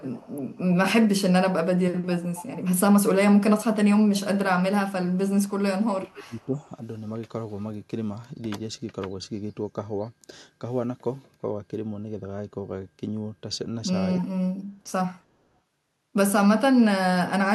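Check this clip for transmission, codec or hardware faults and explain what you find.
Two echo-canceller faults appear in this speech, both tied to a loudspeaker on one end of the call.

Echo leak, at 0.0–0.68 s, 2.0–2.44 s, 5.46–5.5 s and 14.18–14.25 s: an echo canceller likely failed to remove all of its loudspeaker's pickup, so a faint copy returns about 260 ms late, roughly 20 to 40 dB below the speech, heard as brief ghostly repeats.

Speech suppressed in double talk, at 5.94–6.71 s and 14.2–14.8 s: with both sides talking, the canceller likely mistook live speech for echo and attenuated it. The voice sinks by about 20 dB, then about 30 dB.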